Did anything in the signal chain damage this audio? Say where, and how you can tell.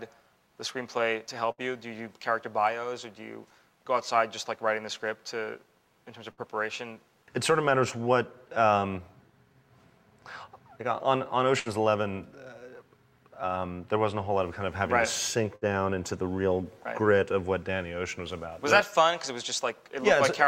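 Yes, at the network stage: bursts of packet loss at 1.51, 6.32, 11.59 and 15.56 s. Each time the receiver stretches the last sound, fading, for about 60 ms, then jumps ahead with 60 ms missing. A spectrogram shows smeared, dimming bands ending in abrupt cuts.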